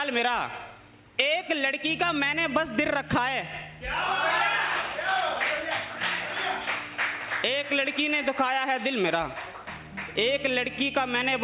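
Nothing stood out on listening, beyond the narrow band of the call path, with no content above 4 kHz, which fits a G.711 mu-law connection at 64 kbps.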